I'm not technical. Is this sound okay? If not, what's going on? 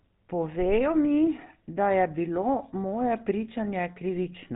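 No, not quite. The whole way through, the speech has the buzzy, gravelly roughness of the GSM full-rate codec, the old mobile-phone coding. It rebuilds the voice from a rough model, throws away everything above about 4 kHz, and leaves it muffled and grainy.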